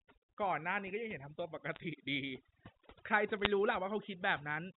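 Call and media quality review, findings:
Overdone noise removal, whole clip: background near-silent with twinkly specks. Suppressor set too hard, zeroing bands near its noise estimate and taking quiet speech with them.

Bit errors on a digital phone line, 1.72 to 1.80 s and 3.40 to 3.46 s: short crackle bursts of sharp ticks over intact speech. Flipped bits on the G.711 mu-law link corrupt single samples. Error rate sounds well under one percent.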